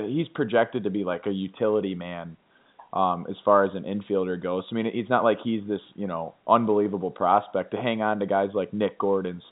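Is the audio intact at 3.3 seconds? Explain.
Yes, the audio is intact at 3.3 seconds, with nothing wrong at that moment beyond the ordinary telephone-band sound of G.711 coding, which carries nothing above about 3.8 kHz.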